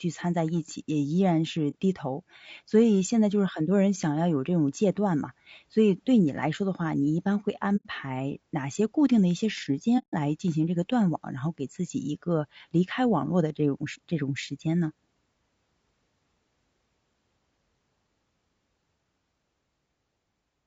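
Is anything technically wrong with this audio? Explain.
Yes. Throughout the speech there is a rough, grainy texture, with noise filling the gaps between harmonics and a thin, synthetic-sounding top band. This is likely low-delay AAC compression (AAC-ELD), whose short frames resolve pitch poorly, and the damage points to a bitrate around 32 kbps. The noise sitting between the harmonics, rather than a steady hiss underneath, separates it from ordinary background noise.

There is also AAC frame loss with muting at 1.70 to 1.76 s, 7.76 to 7.86 s and 9.98 to 10.15 s, lasting about 30, 90 and 150 ms, which fits one, three and five lost frames. The decoder zeroes each missing frame, and the overlapping windows fade the sound out and back in. The single lost frame is a brief dip and the longer runs are soft-edged holes, unlike a hard dropout.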